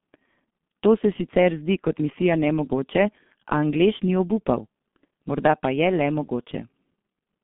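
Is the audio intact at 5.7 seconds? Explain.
No, at 5.7 s, like the whole clip, the speech runs through the G.723.1 codec. Its coarse frame-based low-bitrate model drops everything above 3.6 kHz, leaving muffled, hoarse, smeared speech.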